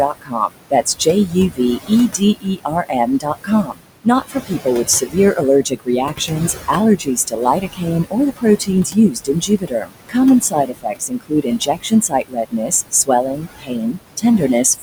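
Speech recorded over room noise sitting about 10 dB below the voice, with noise suppressor artifacts throughout: the background is pulled down by about 20 dB, unlike a plain gate's clean on-off steps. Speech cut by the noise suppressor runs from 0.11 to 14.42 s, totalling roughly five seconds. Quiet consonants and endings fade by up to about 22 dB instead of vanishing outright as in a dropout.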